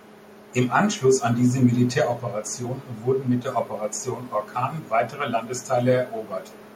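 A faint delayed copy of the speech trails in at the very end, from 6.5 s to the close, lagging by about 250 ms and sitting roughly 30 dB below the talker. It is an echo leak, likely from a loudspeaker on the far side whose echo canceller let some of its microphone pickup return.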